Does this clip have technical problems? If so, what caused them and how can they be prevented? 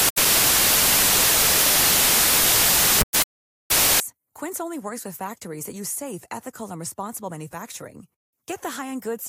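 Yes. From 0.0 to 4.0 s the speech is overlaid with loud, harsh broadband noise from samples built from the wrong bytes: each sample's bytes are misassembled, so rapidly changing low bits dominate. Prevent it by validating byte order, offset and sample alignment when parsing.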